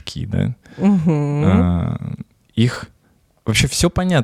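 Chunks out of order at 2.72 to 2.76 s: within this 40 ms stretch of speech, one 20 ms chunk of audio is delivered a single slot late, so it plays after the chunk that should have followed it. No audio is missing, but the swap creates three abrupt joins where the waveform doesn't line up. The result is a brief scrambled blip in the speech.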